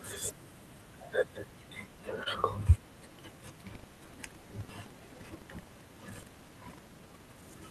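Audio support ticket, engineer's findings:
Short stall from a late packet at 2.23 to 2.28 s: sound held for 25 ms, then picks up exactly where it left off, with a faint buzzy sag on the held bit. Nothing actually dropped. Jitter buffer ran dry waiting on a late packet, receiver stretched the last chunk to cover. Playout delay ends up 25 ms longer afterwards, so the buffer absorbed it rather than skipping ahead.

Buffer tearing from 3.71 s to 7.57 s: steady robotic rattle at 23.4 Hz riding on the speech, only there while there's signal, gone in the gaps. Rate fits a 2048-sample buffer. Writer and hardware reader have slipped and cross mid-period, so a small slice of each buffer, around 15%, is stale audio from roughly a tenth of a second back, spliced in with hard edges both sides.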